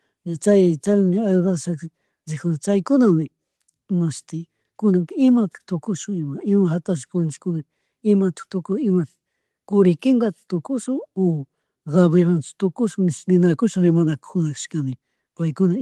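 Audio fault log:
The speech signal holds steady across the whole clip, with no audible technical faults at any point.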